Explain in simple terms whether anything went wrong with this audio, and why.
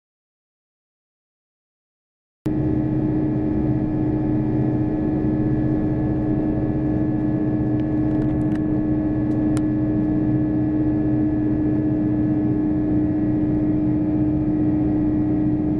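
Something did go wrong, right at the top. The recording opens in an audio dropout to silence: from the very start until about 2.46 s there's nothing at all, not even the faint hiss or room background you'd normally hear, and then the sound suddenly kicks in. That kind of dead-flat gap most likely means the input was cut off for a moment, say a loose connection or a mute switch, while the recorder kept running, so whatever happened in those first couple of seconds is simply gone.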